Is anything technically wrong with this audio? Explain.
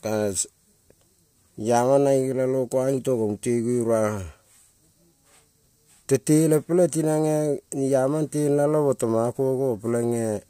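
No, nothing technically wrong stood out on listening to this speech recording.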